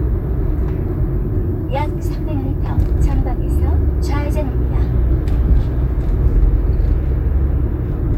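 No technical faults are audible.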